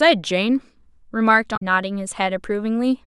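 At 1.53 s the speech is broken by damaged data in the compressed stream. It lasts to about 1.62 s, just under a tenth of a second. Here some bytes of the encoded file were corrupted or lost. The decoder could not read those frames properly. It lost its place and had to hunt for the next valid frame header before playback resumed. The result is a brief chirp, squawk, click or short hole cutting through the speech.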